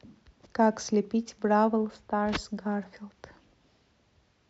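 No technical faults can be heard anywhere in the speech. There is no moment in the recording that stands out as a fault.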